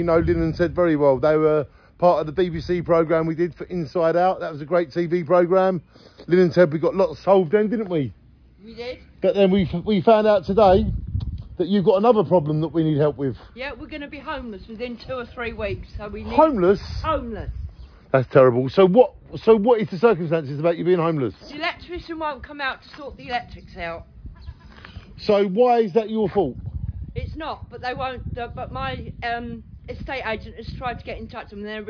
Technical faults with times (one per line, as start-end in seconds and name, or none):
none